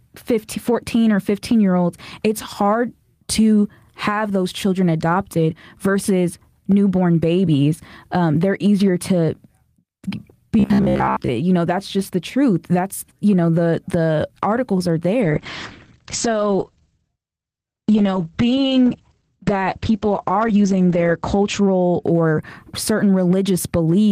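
From 10.60 to 11.30 s the speech turns into a rigid, metallic buzz. This is robotic sound from repeated short buffers. The buzz sits at about 66.7 Hz, which fits a segment of roughly 15 ms played over and over. The likely cause is audio arriving too seldom, so the player loops its last short stretch to fill the gap. Most of the real audio in this span is skipped. The speech still roughly follows its shape.

Just after "the the articles are", at 15.23 s, a call bitrate drop begins. It lasts until 22.31 s. The encoder falls from 32 kbps to 10 kbps and stays at its lowest for about 5.8 s. Fewer bits mean coarser coding. The top of the spectrum is also cut, from 20 kHz down to 8 kHz. The speech sounds muffled and rough, with a watery edge, until the rate recovers.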